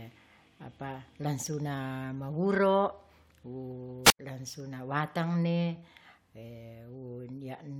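From 4.03 to 4.19 s the radio link fades until squelch mutes it, a wireless microphone squelch dropout: a rise of hiss, then a 92 ms silent hole before "langsuna watangne".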